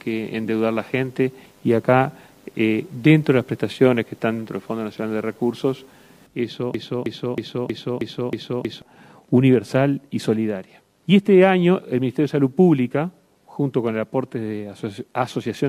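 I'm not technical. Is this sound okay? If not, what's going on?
No. From 6.74 s to 8.82 s the sound gets stuck in a broken-record loop. The same short piece, about 0.32 seconds long, plays back to back seven times in a row, with no change between repeats. The likely cause is that the player or stream stalled and kept resending the last bit it held. The sound that belonged in those two seconds never plays.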